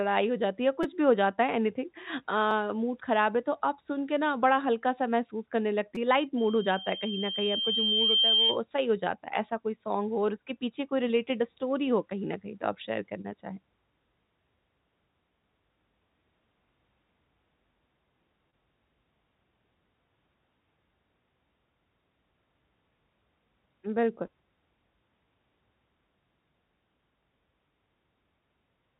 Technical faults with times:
0.83 repeated buffer
2.51 repeated buffer
5.95 repeated buffer
6.37-8.60 loudspeaker feedback squeal
11.08-11.11 short concealed packet loss
13.21-13.26 short concealed packet loss
18.22 repeated buffer
18.50-18.54 short concealed packet loss
24.26-24.30 short concealed packet loss

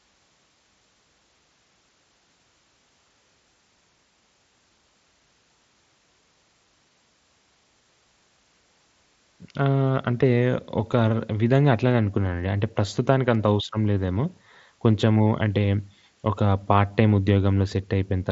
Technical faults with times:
none

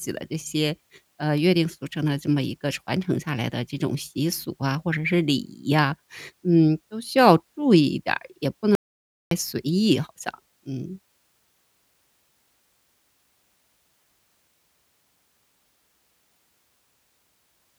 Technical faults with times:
8.75-9.31 audio dropout to silence

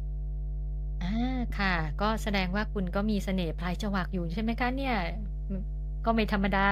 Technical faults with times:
0.00-6.71 mains hum

